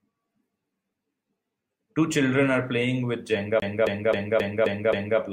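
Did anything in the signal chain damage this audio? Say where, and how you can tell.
Yes. The damage is at the playback stage: a CD stuck on one turn. From 3.6 s to 5.19 s the speech stops moving forward and a single 0.27 s fragment repeats six times at an even rate, with a brief mute at each jump back. That regular stutter means the player's laser is being thrown back one track at the same point on every rotation, which fits a scratch on the disc surface.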